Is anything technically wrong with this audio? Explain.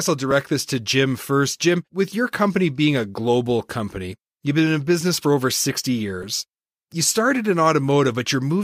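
Yes, there are two repeated buffer faults in this speech. At 0.31 s, just before "this to", a 5 ms block plays one extra time, and at 6.23 s a 5 ms block plays twice more. Each time, fresh audio missed its deadline, so the device replayed the block it already held, leaving hard joins and a small gap in the real audio. Because the block is so short, the repeats come across as a brief click or buzz rather than an audible stutter.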